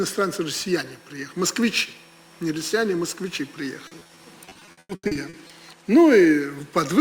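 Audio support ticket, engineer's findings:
Repeated packet loss (robotic sound), 3.87–5.51 s: choppy dropouts, gaps up to 100 ms, roughly a third of that stretch patched over by concealment. Likely network or jitter buffer.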